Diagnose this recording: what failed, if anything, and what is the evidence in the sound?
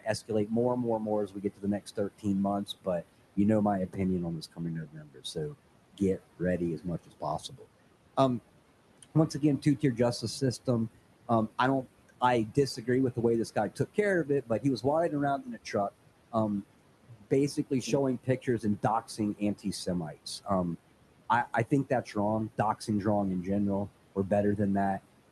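Noise suppressor artifacts from call processing: the room noise is gated down by about 18 dB throughout and pumps between phrases. The spectrogram shows a blotchy, flickering noise floor.

Speech cut by the noise suppressor at 0–7.66, 9.03–10.68, 11.83–15.74, 16.32–20.47, 21.71–22.89 s (after "I I"), and 24.15–25.32 s (after "wrong in general"). Quiet speech is misread as noise and attenuated by up to about 19 dB. The waveform shows notched, missing syllable tails.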